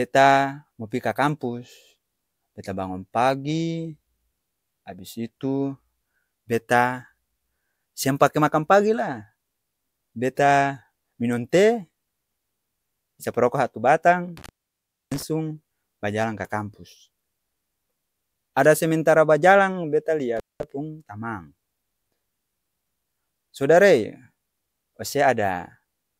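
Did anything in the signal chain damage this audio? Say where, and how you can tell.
Yes, there is an intermittent contact in the analogue wiring, most likely a loose cable or plug. The speech drops out from 14.37 to 15.22 s, with the line open for about 0.63 s, and again from 20.37 to 20.63 s, open for about 0.2 s. Each gap starts and ends with crackle as the contact breaks and remakes, leaving faint hiss in between. On a spectrogram, thin broadband vertical streaks bracket a near-empty band, and the waveform collapses abruptly to a low noise floor.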